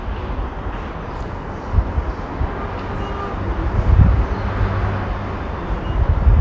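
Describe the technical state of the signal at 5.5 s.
At 5.5 s the signal is intact, with no dropout, clipping, glitch or other fault.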